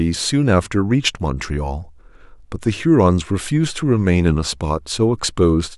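Listened through, the speech recording shows no technical faults at any point.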